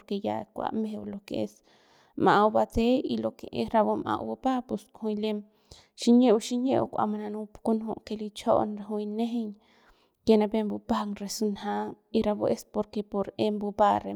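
A speech recording with nothing technically wrong with it.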